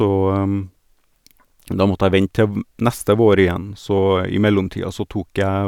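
Nothing stood out on listening to this speech recording.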